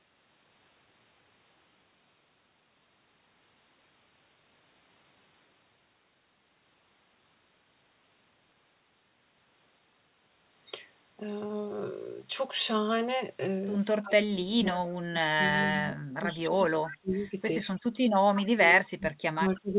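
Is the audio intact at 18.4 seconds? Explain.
No, there's an echo leak from 18.35 to 18.46 s: a delayed copy of the voice, trailing about 317 ms behind and roughly 10 dB quieter. It's likely a far-end echo canceller letting some loudspeaker pickup slip through and sending it back.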